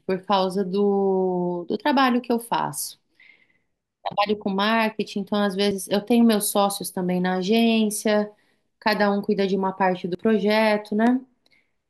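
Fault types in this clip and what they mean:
Dropped buffer (overrun): at 1.77, 5.71 and 10.15 s the speech jumps forward, losing about 20, 50 and 50 ms. The likely cause is samples being overwritten before they were collected. Unlike a dropout, there is no silent gap, only a skip.
Loud pop: a single sharp pop at 11.07 s lasts about 24 ms and peaks roughly 10 dB above the speech. It is likely a voltage pulse added to the signal. Unlike a dropped buffer, the speech carries on underneath without skipping.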